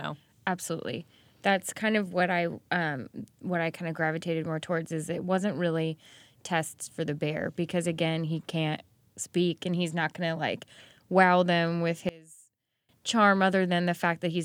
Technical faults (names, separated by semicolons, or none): one channel inverted